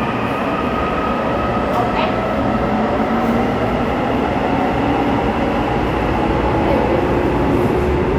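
No technical faults are audible.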